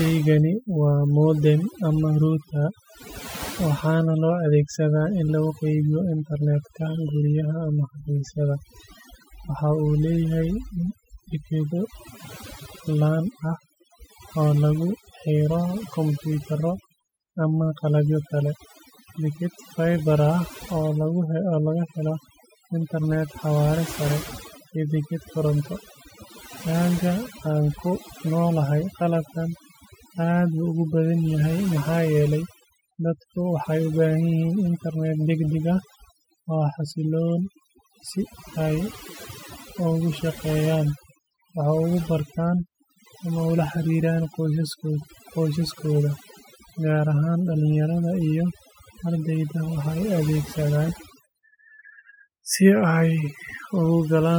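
From start to finish the speech carries overdone noise removal. The noise reduction was pushed far too hard, so individual frequency bands are pulled down or switched off whenever their level sits close to the estimated noise floor, and the softer components of the voice are stripped out along with the noise. Between phrases the background collapses to near silence dotted with twinkling specks.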